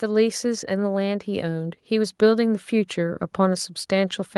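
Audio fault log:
1.25–3.76 s automatic gain rising: the gain control slowly lifts the level about 5 dB, so speech and background swell together; the waveform envelope and spectrogram brighten steadily.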